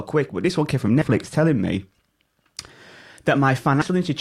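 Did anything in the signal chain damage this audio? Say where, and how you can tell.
Yes, there are compressed frames skipped at the codec stage, at 1.01 to 1.06 s, between "this one came from" and "telling me", and at 3.81 to 3.86 s. Each jump loses roughly a tenth of a second, which points to several 20 ms frames dropped.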